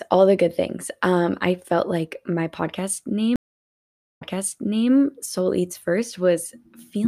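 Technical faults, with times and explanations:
3.36–4.90 s, stream reconnect: the connection dropped just after "felt like my podcast" and the player restarted its decoder mid-stream, so the speech goes silent for 0.84 s. A resent burst from the server then resumes it 0.71 s earlier, repeating audio already heard.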